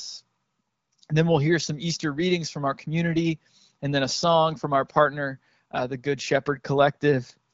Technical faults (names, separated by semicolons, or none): none